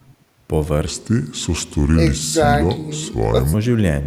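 A speech clip in which, from 0.87 to 3.54 s, the voice drops deep and drags: a section at the wrong speed, running at 0.769 times normal, roughly five semitones low, likely from a wrong playback clock.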